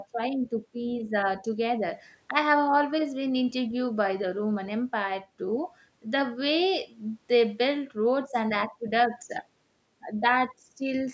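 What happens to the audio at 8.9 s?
Nothing goes wrong at 8.9 s: the speech carries on intact through that moment, with only the usual call microphone processing, whose high-pass filter thins out the lowest bass and whose bandwidth stops at 8 kHz.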